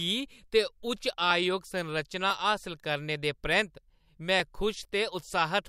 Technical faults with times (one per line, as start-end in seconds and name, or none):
1.31 dropped samples
2.30 dropped samples
4.40 dropped samples